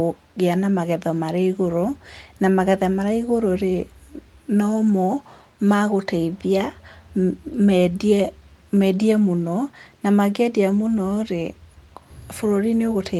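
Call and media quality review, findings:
No audible faults in the speech recording, so nothing to attribute to capture, transport or playback.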